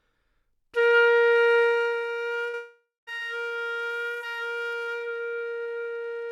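From 1.60 to 2.07 s, zipper noise: a gain drop of roughly 10 dB is applied in unsmoothed 1 dB steps, about 40 per second, so a fine ticking rides on the fading sound. At 2.49 to 2.55 s, a short concealed packet loss leaves about 40 ms missing; the receiver extends the preceding sound to bridge it, heard as a brief smear. From 2.55 to 3.09 s, a likely long network dropout cuts off about 0.52 s of audio. The concealment continues the last sound as a fading buzz or hiss, then about 0.22 s of silence follows before the sound resumes with that stretch gone.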